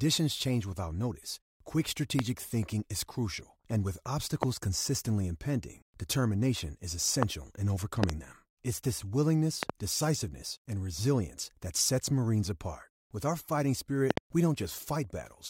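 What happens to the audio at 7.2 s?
At 7.23 to 7.25 s there's a loud pop, a single sharp crack lasting about 20 ms that jumps well above the speech, somewhere around 20 dB over it. What you're hearing is a sudden voltage step or spike getting added to the signal, likely from a plug, switch, static discharge or driver glitch, and the downstream circuitry shapes it into that click. The speech keeps running underneath without a break.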